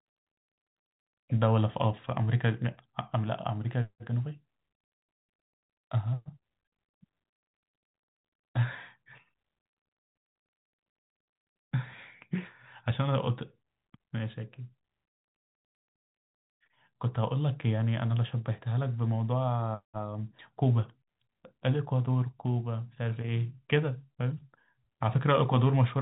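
No technical faults can be heard in this speech, which comes through the G.711 telephone coding with nothing above about 3.8 kHz.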